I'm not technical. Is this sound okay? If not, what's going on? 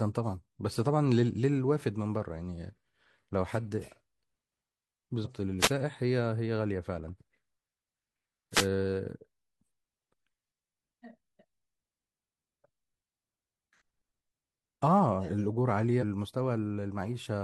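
No. There are two kinds of problem in this speech recording.

The first is damaged data in a compressed stream. Part of the stored, compressed recording is corrupted, so the playback software can't read that stretch properly. It loses its place and has to hunt for the next readable chunk. You hear this as a brief chirp or blip, from 5.21 to 5.27 seconds and again from 15.98 to 16.04 seconds.

The second is a wireless microphone noise hit. The radio link between the microphone and its receiver briefly weakened, likely because radio reflections cancelled each other out. When the signal dips, the receiver's own background hiss comes through. This sounds like a short swish or burst of static, from 5.59 to 5.71 seconds and again from 8.52 to 8.67 seconds.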